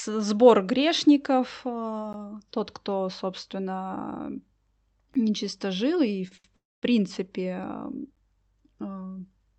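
At 2.13 s, just before "тот кто собственно", and again at 5.14 s, the audio was delivered in 3-second chunks with about 13 ms of silence left at each join. Nothing is lost, but the sound breaks off in a short hole. This is a gap between chunks.

From 6.28 to 6.34 s and again from 6.37 to 6.47 s, right after "нечисто жил и", packets arrived late and the jitter buffer emptied. The receiver held the last sound for 32 ms and then 70 ms, so the sound drags with a faint buzz before resuming. These are short stalls from a late packet.

From 6.56 to 6.85 s, the likely cause is a longer delivery hold-up that left the receiver with nothing to play. It filled about 262 ms, first extending the last sound and then dropping to near silence for roughly 230 ms before the sound continues where it stopped. This is a call audio freeze, and it inserts a pause without losing anything.

At 8.15 s, the 3-second chunking produces another gap between chunks, again a hole of about 13 ms. 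Across the clip, the call path's Opus coding limits the top end to about 8 kHz.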